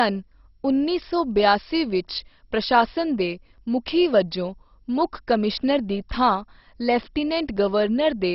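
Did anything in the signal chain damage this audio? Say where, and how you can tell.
Yes. At the codec stage the speech was likely squeezed through MP2 compression at a very low rate, which fits about 32 kbps. Nothing survives above 5.6 kHz, so it sounds dull, and the heavy quantisation leaves a gurgling, grainy texture throughout.

At the buffer stage there is audio missing between chunks, likely from a recorder handing over 2-second blocks. Tiny skips of a few milliseconds fall at 3.58, 5.57 and 7.57 s, about two seconds apart, with the two sides butted together and no gap.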